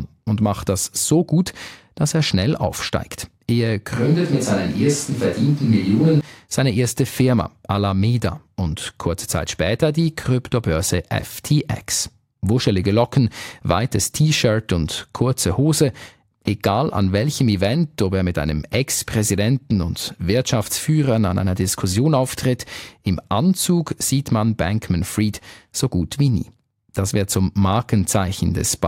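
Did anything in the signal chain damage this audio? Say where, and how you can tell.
Yes. From 3.96 to 6.21 s, before "seine erste", the speech abruptly turns roomy and thin at similar level, room noise roughly 30 dB down, likely a switch to a distant microphone at capture.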